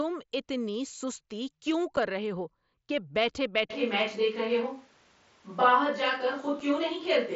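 At 1.96 s, between "اتنی سستی کیوں" and "رہے ہو کہ بیٹھ", a single 7.5 ms hole with hard edges interrupts the speech. This is unconcealed Bluetooth headset packet loss: one packet failed to arrive and nothing filled the gap. An isolated gap marks it out, rather than the sustained crackle of many losses.

From 3.72 s to the end, after "رہے ہو کہ بیٹھ", the voice suddenly turns roomy and hollow, with thinner bass, while loudness stays about the same and a faint background sits well below the speech. The likely cause is a switch to a distant microphone. Reverberation, not a level drop, separates it from a gain change.

At 6.60 s another 7.5 ms dropout of the same kind cuts through the distant-microphone sound. It is a second single lost packet, heard as a brief, sharp-edged gap rather than a fade or a smeared patch.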